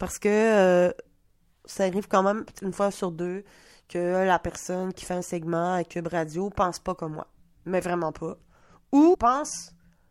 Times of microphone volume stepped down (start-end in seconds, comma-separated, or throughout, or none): none